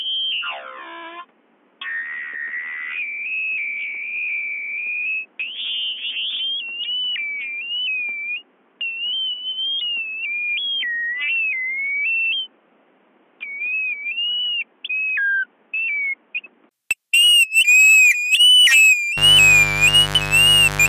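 From the start until 16.71 s the everyday sound is dull and boxy. Nothing reaches above 3.6 kHz, the level sits roughly 10 dB lower, and a different background hiss lies roughly 35 dB beneath the signal. At 16.71 s a 20 ms gap is followed by full bandwidth and level returning. This is likely an input switched to a poorer device, with a narrow-band microphone or headset path in use until the system moved back.

From 19.17 s to the end of the clip a steady, raspy mains buzz sits roughly 10 dB below the sound. It is built on a 50 Hz supply. Sharp switching spikes from a dimmer, rectifier or poorly shielded line arrive twice per cycle, so the buzz repeats at 100 Hz. Its harmonics stack up well into the kilohertz range, which gives it that gritty edge rather than a smooth hum.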